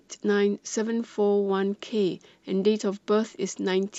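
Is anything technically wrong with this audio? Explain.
Yes. From 3.25 to 3.41 s there is DAB burbling. Weak reception lets bit errors corrupt the audio data, so wrong samples put short blips of noise into single sub-bands over the speech.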